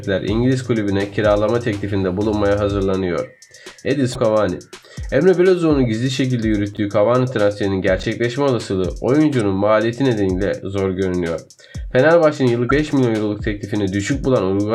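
At 4.12 to 4.16 s there is a brief squawk from damaged data in the compressed stream. Part of the encoded data is corrupt, so the decoder misreads those frames, loses sync and skips ahead to the next valid frame header. The result is a short chirp. The same thing recurs at 9.37 to 9.40 s as a shorter blip and at 12.66 to 12.71 s as a slightly longer one.

Between them, at 6.74 to 6.78 s and again at 8.00 to 8.04 s, the sound has chunks out of order. A chunk of about 10.7 ms plays three chunk-lengths late, after material that should have followed it. Nothing is missing, but the reordering creates three hard joins. These are heard as a quick jumbled stutter. At 12.91 to 12.93 s, just after the last squawk, a single chunk arrives one position late, giving a shorter jumbled moment.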